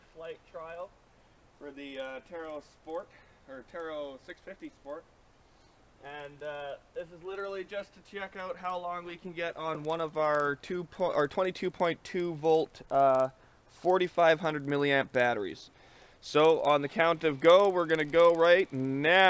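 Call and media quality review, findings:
Steady 20 Hz tick-buzz riding the signal throughout, gone in silences. Resampler restarted on every block, fits 48 kHz to 16 kHz, 50 ms block edges mismatched.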